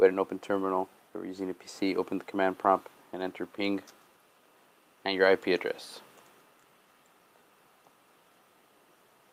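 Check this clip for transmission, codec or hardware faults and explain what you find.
Nothing here points to a transmission, codec or hardware problem, so there's nothing to flag.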